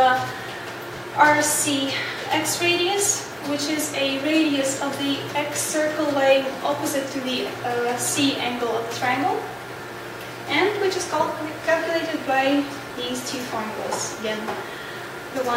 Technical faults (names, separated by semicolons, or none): chunks out of order